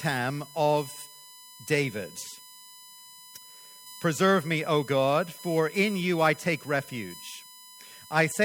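A fixed-pitch whine sits under the speech from start to finish. It is USB whine. The bus draws current in 1 ms frames, and that pulsing leaks into the audio through power or ground. The result is a tone at 1 kHz with a series of harmonics. The strongest of these is at 5 kHz, so the whine sounds high rather than low. It sits roughly 20 dB below the speech.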